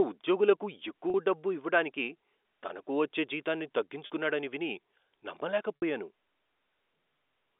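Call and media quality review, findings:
Packet loss with pitch repetition, three events.

1.10 s, just before "డబ్బు ఇవ్వడానికి తనకు వచ్చే": brief held, buzzy sustain, 40 ms. Receiver concealment repeating last pitch period across the gap, which fits two 20 ms packets lost.

4.06 s, after "ఇవ్వడానికి తనకు వచ్చే జీతాన్ని": same buzzy hold, 40 ms, same mechanism.

5.76 s: longer 60 ms hold, audible fade before speech resumes, consistent with three packets lost. Telephone band 300 Hz to 3.6 kHz, G.711 A-law path.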